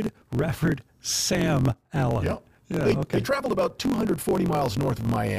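From start to finish, the speech carries a block size mismatch, truncated type. One stage hands over longer blocks than the next stage takes in. The tail of every block is dropped. A steady buzz sits under the speech at about 45.9 Hz, the rate at which blocks repeat. That rate fits a 1024-sample written block. The speech also runs about 1.07 times too fast. Its timbre stays.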